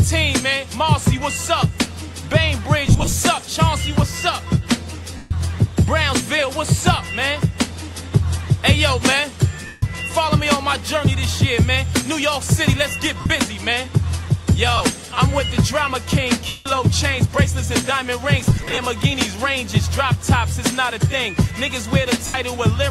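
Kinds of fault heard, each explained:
Lost LE Audio frames: around 2.87–3.13, 5.17–5.31, 9.66–9.82, 13.20–13.26, 14.77–14.81, 16.47–16.66, 18.43–18.78 and 22.26–22.34 s, the audio turns into a brief noisy smear. Each time, the LC3 decoder filled missing frames by repeating the last spectrum with random signs, fading it as the gap went on. The losses run from 30 to about 195 ms, fitting 7.5 ms frames. At 2.87 and 18.43 s they are scattered, in runs of a few tens of milliseconds.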